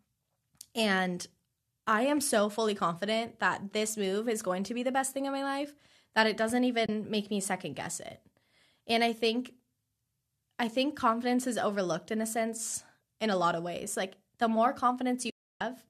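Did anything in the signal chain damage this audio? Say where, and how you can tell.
Yes. AAC frame loss with muting in the network-to-decoder stage: soft-edged silences at 6.86–6.89 s (about 30 ms) and 15.30–15.61 s (about 310 ms) fade out and back in through overlapping windows. Those fades, rather than hard cuts, distinguish them from buffer dropouts.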